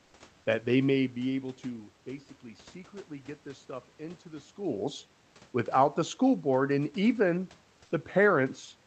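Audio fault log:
0.05–0.13 s, comfort noise in place of the background: for about 80 ms near the start, the room noise, already about 39 dB below the loudest sound, turns into a steady, featureless hiss about 1 dB quieter. This is likely the receiver filling a gap in transmission with synthetic noise, which fits Opus discontinuous transmission. On a spectrogram, the grainy background texture smooths into an even wash capped near 8 kHz. The waveform shows a flat, uniform low band.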